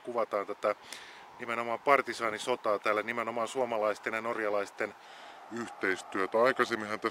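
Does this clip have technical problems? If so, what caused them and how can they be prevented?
Yes. From 5.06 to 7.1 s, a section at the wrong speed runs at 0.876 times normal. The sound drops about two semitones and drags, likely from playback against a mismatched clock. A spectrogram shows every band stepping down and events stretching. Keep sample rates matched through editing and playback.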